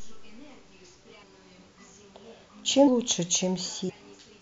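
Compressed frames skipped at 1.22, 2.86 and 3.88 s: each time a run of whole frames never reaches the output, whether lost from the file or rejected by the decoder as damaged. The speech leaps forward by roughly 0.2, 0.3 and 0.4 s, and each gap is a multiple of a step that fits frames of about 26 ms. Overlap between neighbouring frames softens each join into a short smeared blip rather than a sharp click.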